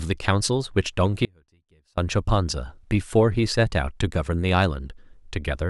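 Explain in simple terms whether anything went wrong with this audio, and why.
An audio dropout to a faint residue happens from 1.25 to 1.97 s, so the speech disappears for about 0.7 seconds. It cuts out suddenly and returns just as suddenly, not like a natural pause or a fade. During the gap only a very faint trace of the sound remains, far quieter than normal. The likely cause is a brief loss of the main signal while the rest of the recording chain kept running.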